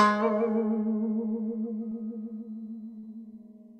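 A music recording with short concealed packet loss: around 20 ms of audio failed to arrive near 1.89 to 1.93 s, and about 40 ms near 2.99 to 3.05 s. The receiver patched each gap by extending the preceding sound, leaving a brief smeared wobble before the music resumes.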